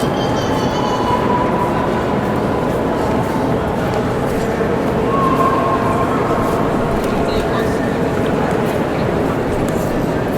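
No technical faults can be heard anywhere in the audio, and the signal stays steady and intact throughout.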